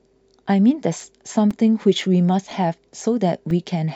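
From about 1.01 s to 3.51 s, something blocks the USB bus or audio driver every 0.5 s. These are periodic USB or driver dropouts. Each time, a few milliseconds of speech are lost and replaced with silence, roughly seven times in all. Each gap cuts the waveform abruptly and then resumes it, so every dropout is heard as a small tick or pop. The steady half-second spacing gives the speech a regular clicking rhythm while it is voiced.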